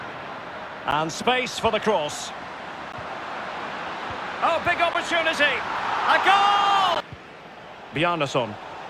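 Gap between chunks at 0.91, 2.92, 4.94 and 6.95 s: the audio stops for 12 ms at each point, repeating every 2 s. It is carried in 2 s blocks with silence inserted at each join, so nothing is lost, only interrupted.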